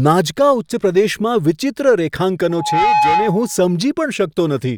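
At 2.50 s a loudspeaker feedback squeal breaks into the speech and holds until 3.64 s. The microphone is hearing the loudspeaker it drives. At around 846 Hz the loop gain goes past one, so that tone feeds itself. It swells over roughly a third of a second. It then sits at about 5 dB above the speech as a steady, piercing whistle.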